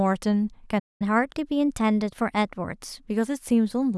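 Playback stall at 0.79 s in this speech recording: the sound cuts out for about 209 ms, until 1.02 s, likely because the player ran out of buffered data or its thread was blocked. Catch-up at higher speed follows from 1.02 to 3.11 s, as the player resamples its backlog at 1.1 times normal speed, raising pitch by roughly one and a half semitones before returning to normal.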